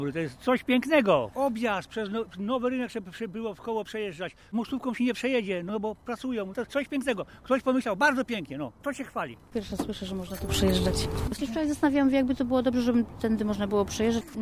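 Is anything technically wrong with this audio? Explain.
No, nothing technically wrong can be heard here.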